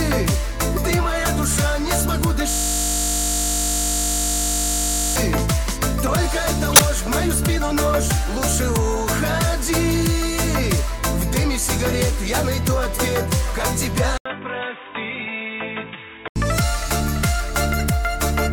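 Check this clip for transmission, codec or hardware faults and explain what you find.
Three kinds of fault appear: a looping hang early on, three short bursts from damaged codec frames, and a stretch where the input's bandwidth and level change.

System hang loop, 2.50 to 5.16 s. The host or driver stalled while the audio hardware kept replaying the same 20 ms of its ring buffer, so one tiny slice of sound repeats about 130 times. Because the loop is so short, it repeats at 50 Hz and fuses into a steady, flat buzz rather than a stutter. The buzz lasts until normal playback resumes at 5.16 s.

Corrupt frame decoded, at 6.69 to 6.80 s, 13.59 to 13.62 s and 17.79 to 17.81 s. In each case, flipped bits inside compressed frames were decoded anyway, so misread gain and spectral codes put energy at the wrong frequencies. The first event spans a few frames and peaks at about -5 dBFS. The later two each cover a couple of frames and sound like brief chirps or blips, peaking at about -10 dBFS and about -15 dBFS respectively.

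Input switched to a poorer device, 14.18 to 16.36 s. An 80 ms gap opens at the switch point. After it, the audio turns dull and boxy, with nothing above 3.8 kHz, the level drops by about 10 dB, and a new noise floor sits roughly 35 dB below the signal. The likely cause is the recording input changing mid-stream to a narrower-band device, such as a headset in call mode. The full tone returns at 16.36 s.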